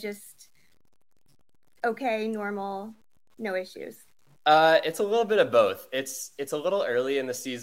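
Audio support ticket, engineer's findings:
Grainy, signal-following distortion on the speech across the whole clip. Quiet syllables and decays turn gritty, with error sitting roughly 40 dB below the signal. Low bit depth without dither, likely truncation to something near 9 bits: rounding error tracks the waveform instead of forming a steady hiss.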